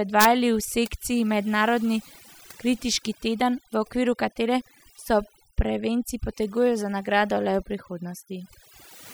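Throughout the speech, overdone noise removal is audible. A noise reduction stage was set too strong. It cuts individual frequency bands whenever they sit near its noise estimate. Quiet parts of the voice vanish too. The background drops and breaks up into twinkling specks.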